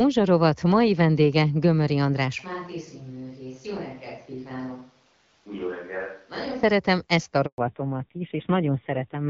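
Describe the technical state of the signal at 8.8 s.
At 8.8 s the call is in a fallback to narrowband, which runs from 7.58 s to the end. The HD Voice wideband codec, which is lightly coded before that point, gives way to a low-rate narrowband codec. Nothing remains above 4 kHz. The sound turns dull and rough.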